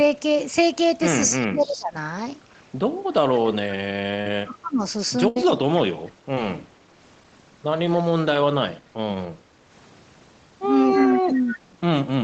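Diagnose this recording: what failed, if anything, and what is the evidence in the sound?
Speech suppressed in double talk, call processing stage. Between 1.35 and 11.77 s the talker's level repeatedly sags and drops out in pieces, roughly 3 s in total, at worst around 35 dB down. The likely cause is the echo canceller failing to separate near-end speech from loudspeaker echo while both sides were active, so it attenuated everything, the wanted voice included.

Echo leak, call processing stage. From 1.65 to 5.81 s, and again from 11.01 to 11.53 s, a delayed copy of the voice trails the original by 274 ms. It sits about 20 dB below the direct speech in the first stretch and about 15 dB below in the second. This is likely residual loudspeaker pickup that the far end's echo canceller did not fully remove and sent back into the call.

Short concealed packet loss, network stage. Brief smears or wobbles occur at 4.21 to 4.30 s, at 6.35 to 6.37 s and at 7.23 s. 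At 4.21 s the receiver synthesised 40 ms to cover a 40 ms hole and dropped 10 ms of real audio while realigning. The later two events are 10 ms gaps patched with 15 ms and 7 ms of concealment, extrapolated from the preceding sound and blended back in.

Burst of packet loss, network stage. From 5.28 to 5.37 s about 80 ms of audio failed to arrive in time. The decoder filled 73 ms by extending the last sound and fading it, which produces a held buzz or decaying hiss. The sound then resumes further along, with the material inside the gap gone. The 8 kHz Opus band limit applies throughout.

Background gated by the echo canceller, call processing stage. From 9.50 to 9.67 s the room tone dips by about 6 dB for roughly 150 ms, then recovers. This is the canceller clamping microphone gain while it judged the loudspeaker active, and releasing it once that activity ended.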